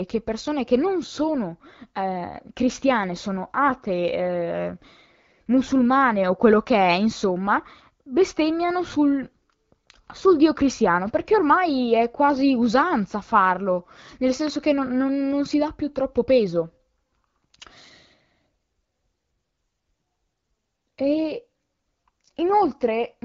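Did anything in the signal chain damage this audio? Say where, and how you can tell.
No, nothing in the chain is doing any harm here; the speech comes over as a clear wideband HD Voice call, which fits the AMR-WB codec at 12.65 kbit/s.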